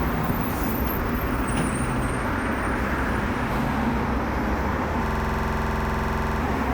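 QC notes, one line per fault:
5.06–6.41 s system hang loop: a 46 ms slice of sound repeats 29 times, giving a 21.5 Hz stutter as hardware cycles a frozen, likely 2048-sample, buffer.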